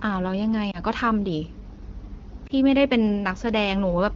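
Lost AMR speech frames: at 0.71 to 0.79 s and again at 2.47 to 2.52 s, a single 20 ms frame failed its check, so the AMR-WB decoder reused the last good parameters, giving a brief dip or warble in the speech.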